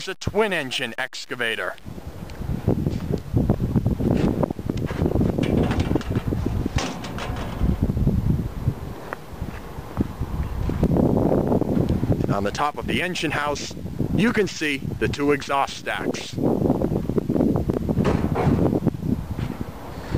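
From 0.50 s to 19.46 s, a click recurs every 0.86 s, about twenty in all, a regular tick under the signal. These are clock drift buffer slips, likely from two devices on separate clocks disagreeing by roughly 400 ppm, so the buffer between them periodically drops or repeats a block of around 15 samples. On a spectrogram each slip is a thin broadband vertical line at even spacing. In the waveform it shows as a step or jump.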